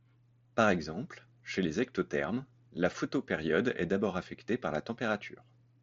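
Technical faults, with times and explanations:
No technical faults are present in this speech clip.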